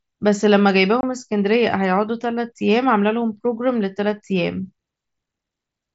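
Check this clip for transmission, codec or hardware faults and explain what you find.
One transmission fault is present: unconcealed Bluetooth headset packet loss from 1.01 to 1.03 s. The link drops about 22.5 ms of speech, which fits roughly three lost headset packets. Nothing fills the gap, so the speech stops dead and restarts with sharp edges. A concealed loss would instead be smoothed over or repeat earlier sound. The headset path is mSBC at about 61 kbps, wideband to 8 kHz, with light codec grain on loud sounds.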